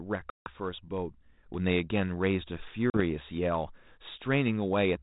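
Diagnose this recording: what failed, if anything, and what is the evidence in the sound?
Hard-edged silent holes at 0.30–0.50 s and 2.90–3.01 s: network packet loss on an ADPCM call, knocking the decoder's adaptive predictor and step size briefly out of step.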